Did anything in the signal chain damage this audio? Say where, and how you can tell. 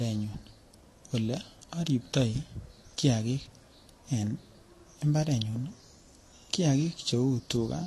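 Yes, at the codec stage, throughout the speech, from start to finish. The top of the band is cut off, so a spectrogram shows a hard horizontal ceiling, and below it two kinds of artefacts overlap: smeared, swirly high-frequency texture and blocky, time-smeared patches around transients. This is likely transcoding between lossy codecs, consistent with a low-bitrate Vorbis encode re-encoded to AAC-LC. The second encoder spent bits reproducing the first one's damage, added its own, and kept the lowest cut-off.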